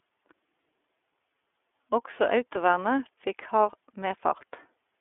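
From start to finish the speech sounds thin and boxed in, with a grainy, slightly synthetic roughness on every syllable. That is the iLBC codec at work. The line passes only about 300 Hz to 3.5 kHz, so the low body and all the upper brightness are gone. The roughness comes from coding each short block of excitation on its own, which fits 30 ms frames at about 13 kbps.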